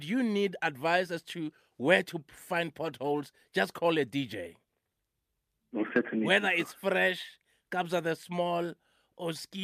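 Nothing technical goes wrong anywhere in this bit of speech, so there's no fault to point to at any moment.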